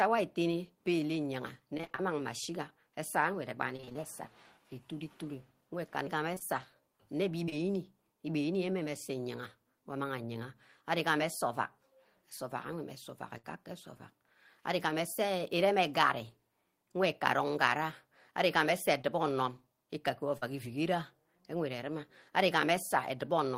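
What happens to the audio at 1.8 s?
Repeated packet loss (robotic sound) hits from 1.77 to 2.03 s. Six short gaps, the longest 25 ms, are patched by stretching the last sound. Nearly half of that stretch is filled this way, so the speech turns choppy.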